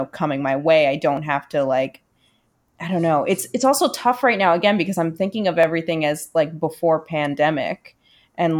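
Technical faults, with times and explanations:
1.17 s and 5.63 s, dropped samples: A tiny stretch of the stream, likely well under a millisecond of samples, went missing, so the waveform leaps straight from one value to a later one instead of moving smoothly. Too little is lost to remove any sound; the discontinuity is heard as a single sharp click, between "coming my way I" and "have to like", then again between "because I'm thinking of" and "as like before".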